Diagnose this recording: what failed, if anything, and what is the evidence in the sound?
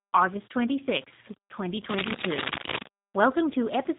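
The codec stage is the problem, and it's there for the whole clip. Nothing gets through above about 3.8 kHz, and the speech has that rough, slightly synthetic edge you get when a G.729 codec rebuilds it from a vocal tract model plus a handful of pulses per frame instead of the actual waveform. The damage is plainly audible, and that mix of bandwidth ceiling and texture points to an 8 kbit/s G.729A leg in the chain.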